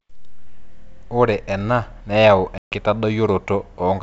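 Packet loss on an ADPCM call opens a hard-edged hole in the speech from 2.58 to 2.75 s, with about 140 ms of audio replaced by silence, which fits a run of roughly seven lost packets. Because ADPCM codes each sample as a change from a prediction, the receiver's predictor and step size drift out of step with the sender's during the gap. When the speech resumes it comes back with brief distortion, before settling over the following tens of milliseconds. The G.722 wideband coding at 64 kbit/s carries the speech around this gap.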